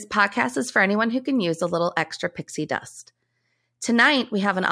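Listening to the speech, nothing stood out as a technical fault at any point.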